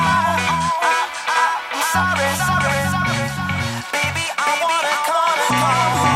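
From start to finish, every sound is followed by a second, equally loud copy arriving about half a second later, so each event is heard twice in a flat, clipped echo with no decay or room colour. This is a doubled audio track: the same full-band signal is mixed in twice, out of step by a fixed offset. The likely cause is the audio being captured a second time through a slower path, or an edit holding two misaligned copies.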